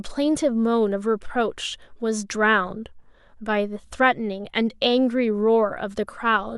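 No technical faults are audible anywhere in the recording.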